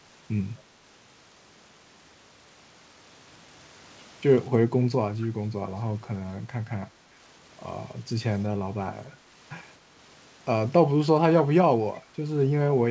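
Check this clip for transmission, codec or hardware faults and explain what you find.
One fault stands out in this speech clip, riding on a call path whose content stops at 8 kHz, which fits a wideband G.722 codec.

Echo leak, 5.2 to 5.26 s: a brief, faint scrap of the voice returns about 25 dB below the speech, trailing the original by 251 ms. The likely cause is a far-end loudspeaker whose echo canceller let part of its microphone pickup slip back down the line.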